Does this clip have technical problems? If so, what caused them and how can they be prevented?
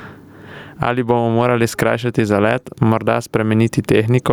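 Yes. Gain pumping runs throughout: the background ducks around 20 dB under loud syllables, likely from excess input gain driving a fast limiter. Unlike a noise gate, pauses swell rather than go silent. Set the microphone gain lower so peaks stay below the limiter's threshold.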